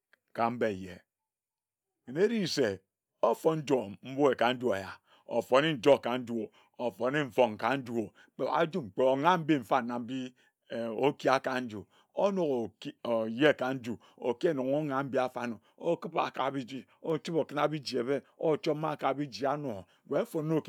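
Nothing technical goes wrong anywhere in this bit of speech, so there's no fault to point to at any moment.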